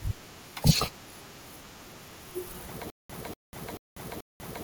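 Stutter with silent gaps, 2.90 s to the end: a 240 ms fragment repeats four times, each followed by 195 ms of digital silence, in a steady 435 ms cycle. A stalled stream likely replayed its last fragment at each retry, so the following speech is lost.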